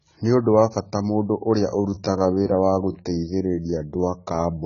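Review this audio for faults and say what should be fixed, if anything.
Throughout the clip the speech sounds dull and smeared, with a warbling, fizzy texture on sibilants and held sounds. This is AAC compression, likely AAC-LC at a very low bitrate, which fits 16 kbps. At that rate the encoder has too few bits for its 1,024-line frames, so it drops the upper band and coarsely quantises what remains, leaving gaps that warble. To prevent it, encode at a higher bitrate or keep a lossless master.

From 1.66 s to the end, the pace abruptly slows while the pitch stays the same. This is a time-stretched section, likely processing that slowed the audio to about 0.74 times its original speed. To lengthen it without changing pitch, the software repeats short overlapping pieces. To prevent it, re-edit or re-record to fit the length instead of stretching, or use a higher-quality stretch algorithm with a milder ratio.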